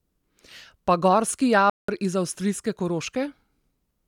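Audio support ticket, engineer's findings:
Playback stall, 1.70 to 1.88 s. Speech cuts to silence mid-flow for about 187 ms, then resumes with "iz avstrijske". Probable component: player output path. Likely buffer underrun or blocked audio thread, starving the device until data arrived again.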